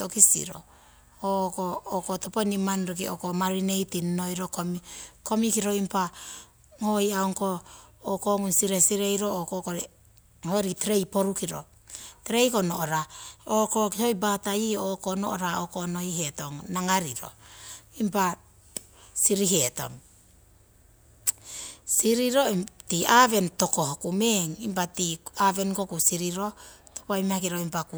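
Nothing goes wrong anywhere in this speech recording, so there's no fault to point to at any moment.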